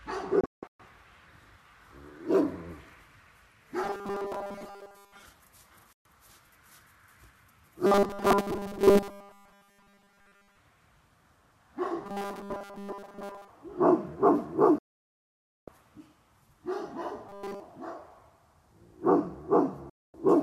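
At 0.41 s a digital broadcast dropout begins. The receiver mutes on failed frames, with 3 ms fades. Holes scattered over 384 ms remove 312 ms of sound. The longest hole lasts 168 ms.

From 3.84 to 5.24 s comes robotic sound from repeated short buffers. A rigid 200 Hz buzz replaces the texture. Most of the real audio is skipped. The likely cause is a 5 ms chunk replayed while new audio arrives too slowly.

Another dropout mutes 5.93 to 6.06 s. The same buzz returns from 7.86 to 10.57 s and from 12.05 to 13.48 s.

The longest dropout silences 14.78 to 15.68 s, about 0.9 s.

From 17.29 to 17.60 s the buzz takes over completely, and nothing real passes through.

A final dropout cuts 19.90 to 20.14 s.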